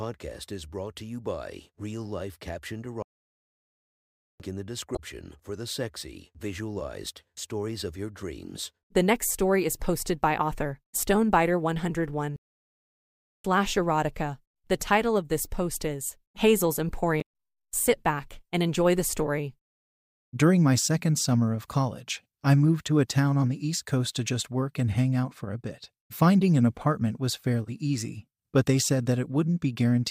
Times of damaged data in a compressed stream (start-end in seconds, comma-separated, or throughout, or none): 4.93-4.99, 17.18-17.22